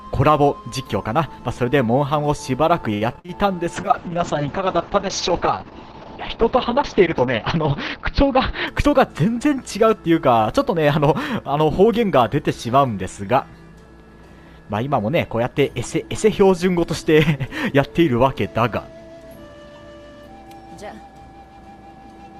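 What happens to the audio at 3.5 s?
Around there you're hearing a jitter buffer slow-down, running from 3.31 to 3.56 s. The receiver's buffer ran low or had just raised its target delay, so it padded things out by repeating tiny pitch-period-sized chunks, adding about 36 ms and playing at 88% speed. The sound stretches out briefly without any change in pitch.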